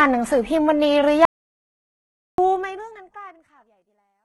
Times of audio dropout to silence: 1.25-2.38

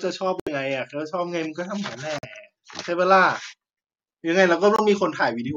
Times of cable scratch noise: none

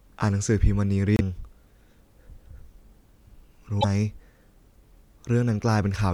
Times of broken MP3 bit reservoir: 1.16-1.21, 3.80-3.85

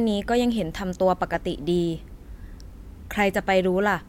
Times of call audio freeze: none

